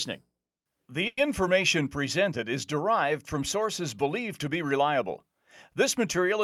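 At about 1.07 s the speech stalls for roughly 0.21 s, just before "presented is derived from": a call audio freeze. The last bit of sound gets stretched into a buzzy fill for around 100 ms, then fades to a brief silence before the talker picks up exactly where they left off. Nothing seems lost, but everything after runs about 100 ms late, which points to packets likely held up in transit and the jitter buffer running dry.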